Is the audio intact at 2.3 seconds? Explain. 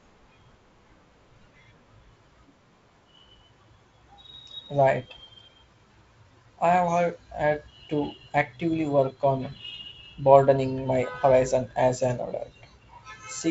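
Yes, the speech at 2.3 seconds is intact, carried cleanly through the G.722 wideband telephone coding with no fault at that moment.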